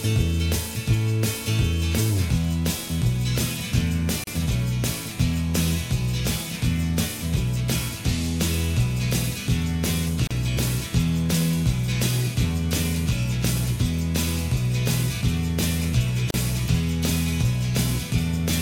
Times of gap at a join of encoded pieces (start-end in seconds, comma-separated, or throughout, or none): 4.24-4.27, 10.27-10.31, 16.31-16.34